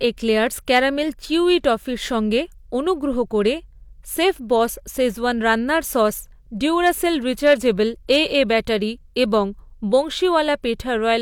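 Speech with hard clipping on four brief peaks, at 0.75–0.79 s just before "চিউই টফির সঙ্গে অনুগ্রহ", 6.86–6.89 s, 7.46–7.53 s, and 8.11–8.38 s leading into "ব্যাটারি এবং". Overdriven by about 2 to 3 dB, the peaks are cut flat, giving short, bright crackle rather than the rounded thickening of soft saturation.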